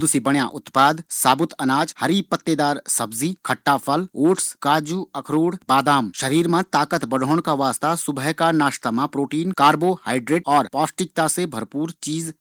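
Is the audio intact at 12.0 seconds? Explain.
Yes, the audio is intact at 12.0 seconds, with no fault at that moment.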